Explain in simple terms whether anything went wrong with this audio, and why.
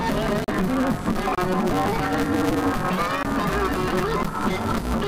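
Two things went wrong. Throughout, there is a steady buzz at about 188 Hz, and the sound races along 1.88 times too fast at roughly normal pitch. This is a block size mismatch (truncated). One stage sends longer chunks than the next accepts, which fits a 256-sample read, and the leftover end of each chunk is dropped.

The sound also cuts to brief silence four times: at 0.44 s for 67 ms, 1.35 s for 50 ms, 3.23 s for 37 ms and 4.23 s for 24 ms. These gaps are likely a Bluetooth stall, where the headphones ran out of audio while waiting for delayed wireless data.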